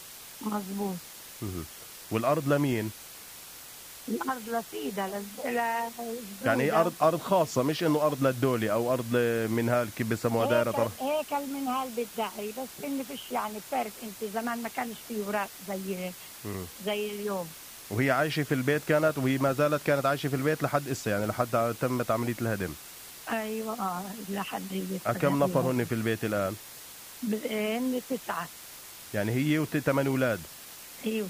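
From start to finish the audio carries low bit depth with dither: the signal has been reduced to about 6 bits, with random noise added before rounding so the quantisation error turns into a steady, even hiss rather than distortion. That hiss sits only roughly 15 dB below the signal. On a spectrogram it shows as a flat, uniform wash across all frequencies; on the waveform, quiet passages never fall to silence but stay fuzzy.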